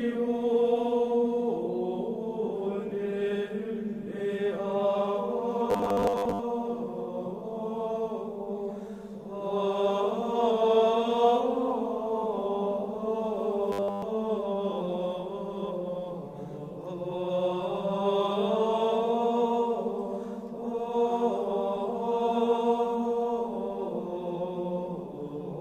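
Robotic sound from repeated short buffers at 5.70 to 6.40 s and 13.72 to 14.02 s: a rigid metallic buzz at 100 Hz, likely from a 10 ms buffer replayed while fresh audio was skipped, covering most of the first stretch and all of the second.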